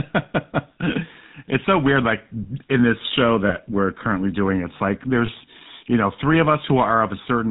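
A speech clip run through the GSM full-rate codec, and the damage is plainly audible from start to finish. The sound is buzzy and gravelly, with the grainy roughness of the 13 kbps GSM codec, which rebuilds the voice from a vocal-tract filter driven by a sparse, regularly spaced pulse excitation. On a spectrogram, energy stops sharply at 4 kHz, and the harmonics look smeared and noisy instead of cleanly striated. Two brief dropouts show lost GSM frames. The first runs from 3.48 to 3.53 s, between "in this show" and "we're currently doing it's". The second runs from 5.26 to 5.29 s, between "currently doing it's like" and "you know three of". Each one fits the loss of a single 20 ms frame, concealed by repeating the last good frame's parameters, so the sound holds as a short metallic ring instead of cutting out. On the spectrogram each shows a short stretch of frozen, repeated spectral texture.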